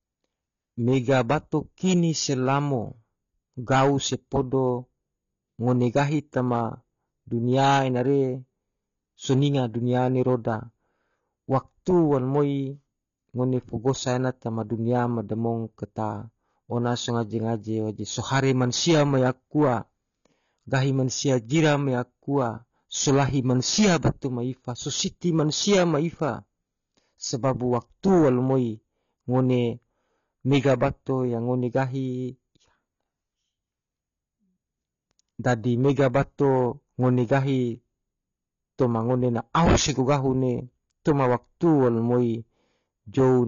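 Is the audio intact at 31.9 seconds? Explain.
No. At 31.9 seconds, as throughout the clip, the speech has nothing above 6.9 kHz and carries a plainly audible smeared, warbling texture, with a fizzy edge on sibilants. This is likely AAC compression, with AAC-LC at a low bitrate, around 24 kbps: the encoder quantises each frame's frequency lines coarsely, drops the top band and leaves holes. A simple low-pass filter would dull the sound without that warble.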